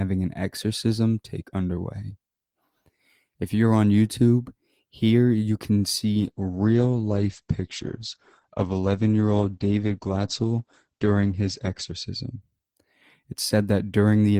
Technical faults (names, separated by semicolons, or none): call bitrate drop